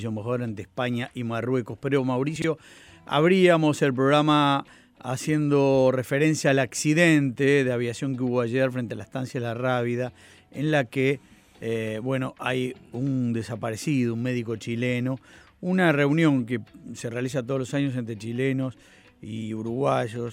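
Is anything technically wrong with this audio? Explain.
Yes. From 2.36 to 2.44 s there are chunks out of order: one 20 ms chunk plays three chunks late, after material meant to follow it. Unlike a dropout, nothing goes missing. The sound is briefly jumbled, with three hard joins.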